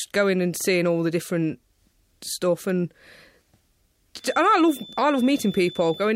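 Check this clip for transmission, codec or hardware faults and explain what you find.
There's one fault here, a feedback whistle, starting at 4.16 s and running through to the end of the speech. It's a thin, steady tone at 3.5 kHz, sitting well below the voice, maybe 20 dB down, and swelling and fading slowly in level. The likely cause is a loudspeaker-to-microphone loop hovering right on the edge of feedback, so a single frequency keeps ringing without actually running away into a howl.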